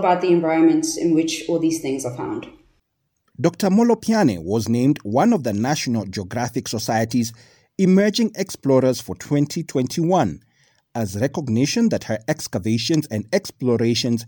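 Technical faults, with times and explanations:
No technical faults can be heard in this speech recording. There is nothing here that calls for a time or an explanation.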